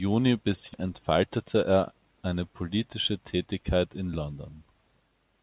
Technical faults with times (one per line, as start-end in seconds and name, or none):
0.74-0.76 skip ahead
0.83-1.93 jitter buffer speed-up